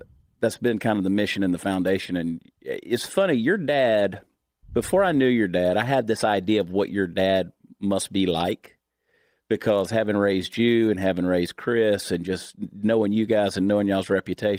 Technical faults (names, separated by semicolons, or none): none